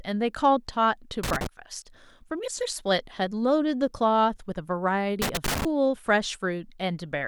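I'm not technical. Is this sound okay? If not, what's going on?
No. A plug or socket in the recording chain has a worn or dirty contact, a loose connector, that keeps touching and letting go as it shifts. Each time it does, the signal is briefly cut off and reconnected, which is heard as loose connector crackle: a rough, irregular burst of crackle and scratching over the speech. It happens twice, from 1.23 to 1.47 s and again from 5.22 to 5.65 s.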